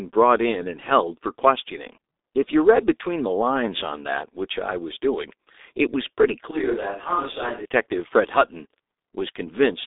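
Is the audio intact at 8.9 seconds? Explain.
No. The G.723.1 codec damage runs through the whole clip: nothing above 3.8 kHz, and its slow, coarse voice model leaves speech hoarse and smeared, unlike a clean band-limit.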